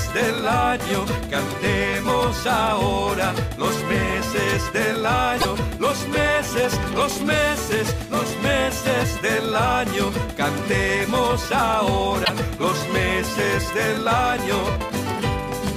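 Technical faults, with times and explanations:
5.37–5.45 s and 12.21–12.30 s, damaged data in a compressed stream: two short bursts of about 80 ms each, heard as a chirp or squawk. Corrupted bytes in the encoded stream make the decoder misread those frames and lose sync until it finds the next valid frame header.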